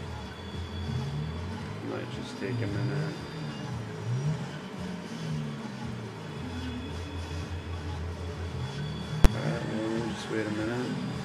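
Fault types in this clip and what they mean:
Invalid numbers at full scale: a calculation turned infinite or invalid for a 10 ms block, pinning the output at one extreme. At 9.25 s the waveform shows a flat slab far beyond the audio's peaks, heard as one bang, with a broadband vertical stripe on the spectrogram.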